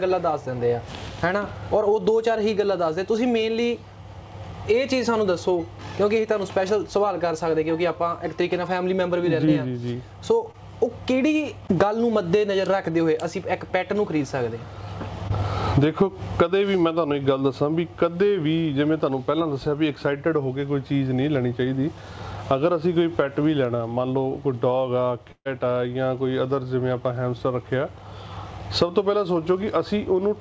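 Around 9.46 to 9.49 s, 10.51 to 10.56 s and 15.28 to 15.32 s there's short concealed packet loss: roughly 20 ms each time never arrived, and the decoder papered over it by extending the last sound, so you get a quick smear or wobble.

Then at 25.32 to 25.47 s comes a proper burst of packet loss, about 140 ms gone. Concealment stretches the preceding sound and fades it, with about 60 ms of outright silence in there, before the audio jumps ahead. Nothing sits above 8 kHz, which fits a wideband call codec like G.722.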